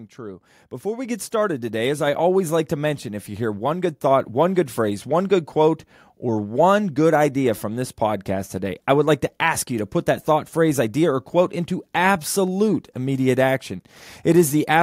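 Speech where the microphone volume is stepped up twice: at 1.05 s, before "get started today as", by about 5 dB, then at 2.07 s, before "always like to mention", by about 2 dB. Unlike compressor pumping, each rise is instant, lifts the background with the voice, and never recovers.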